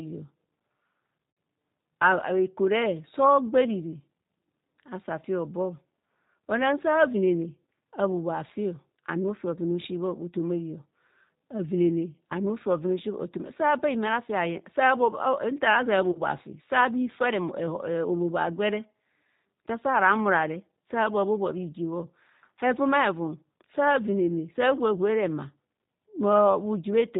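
Throughout the speech there is a narrow, slightly rough and synthetic quality, with nothing above 4 kHz, which fits a G.729A codec running at about 8 kbit/s. The G.729 codec damage is plainly audible. Rather than carrying the waveform, the codec sends a vocal tract filter, a pitch predictor and a few pulses every 10 ms, so the sound is rebuilt from a model and loses its natural texture.

At 1.31 to 1.37 s the sound briefly stretches into a fading buzzy tone or coloured noise for about 60 ms, and a shorter smear follows at 16.12 to 16.18 s, covering about 40 ms of lost audio. This is VoIP packet loss concealed by the speech codec; the gaps fit three and two lost 20 ms packets. The decoder extended its last pitch and filter at falling gain, and the speech stays weak for a moment after each gap.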